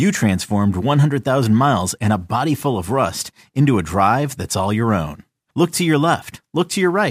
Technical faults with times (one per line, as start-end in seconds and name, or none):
0.00-7.10 sample clock jitter